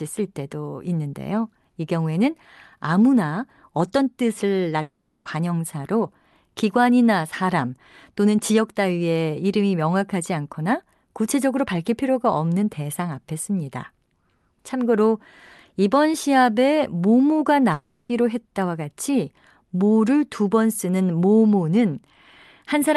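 From 4.81 to 5.27 s and again from 17.73 to 18.11 s, the speech gives way to a fading buzzy continuation of the last sound, with no gap of true silence. This is likely a long network dropout: the receiver filled the lost audio, and speech resumes without the missing part.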